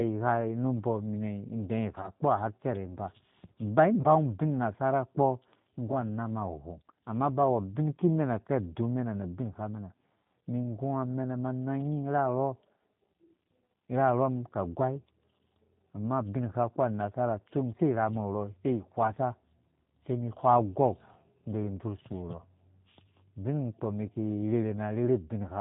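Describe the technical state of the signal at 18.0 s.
At 18.0 s the speech carries G.729 codec damage, present across the whole clip rather than at this moment alone. Each 10 ms frame is rebuilt from a vocal tract filter, a pitch predictor and a few pulses, so nothing above 4 kHz survives and voiced sounds turn slightly rough and synthetic, which fits an 8 kbit/s G.729A stream. Unlike a plain low-pass filter, the remaining band itself sounds synthetic rather than merely muffled.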